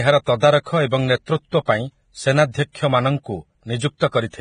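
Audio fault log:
throughout, Vorbis compression: grainy, hissy speech with nothing above 9.7 kHz; likely heavy Vorbis coding at roughly 23 kbps, quantising treble into noise.
0.63–0.66, 1.26, 1.65–1.68, 2.52–2.54, 2.72–2.75 and 3.98–4.01 s, pre-echo: a brief hiss of 19 to 34 ms precedes each attack, as block-wide quantisation noise spills ahead of it.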